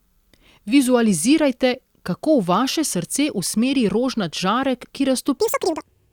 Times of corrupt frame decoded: none

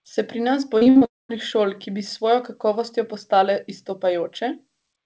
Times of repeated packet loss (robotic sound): 0.78-1.03

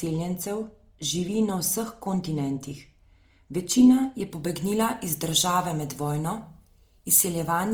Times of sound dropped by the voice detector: none

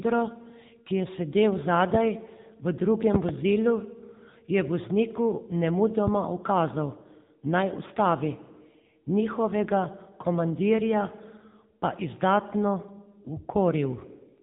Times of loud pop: 6.07-6.10

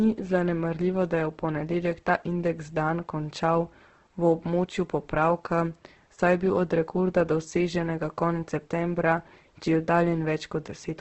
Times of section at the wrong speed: none

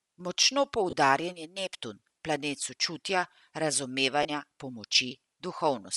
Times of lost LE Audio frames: 0.90-0.93, 4.23-4.25

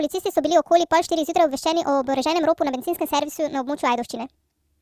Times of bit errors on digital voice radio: none

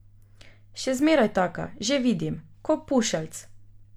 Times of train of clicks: none

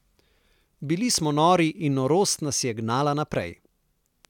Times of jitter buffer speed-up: none

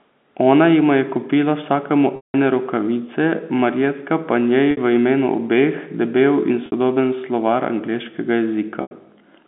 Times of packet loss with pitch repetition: 2.16-2.34, 4.71-4.77, 6.66-6.72, 8.82-8.91

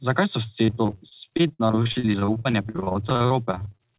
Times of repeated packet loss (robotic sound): 0.66-3.81

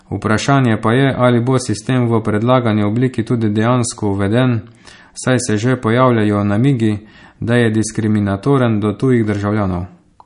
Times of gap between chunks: none

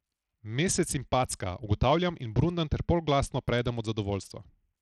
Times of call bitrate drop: none

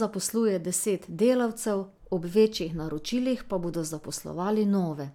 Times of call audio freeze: none

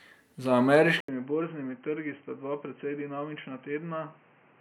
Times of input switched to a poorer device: 1.00-4.60

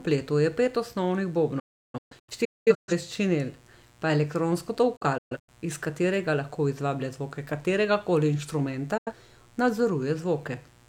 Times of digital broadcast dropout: 1.59-2.92, 4.96-5.49, 8.97-9.13

